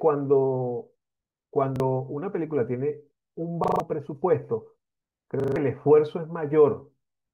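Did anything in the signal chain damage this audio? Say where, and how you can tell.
Yes, at the driver or buffer stage: a repeated buffer. At 1.76 s one short slice of speech plays twice, and at 3.64 to 3.8 s and 5.4 to 5.56 s a single slice repeats five times in a row as a rapid stutter. Identical copies with hard joins fit a 40 ms buffer replayed while fresh audio arrived late. Unlike a dropout there is no silence; copies fill the gap, and the real audio behind them is lost.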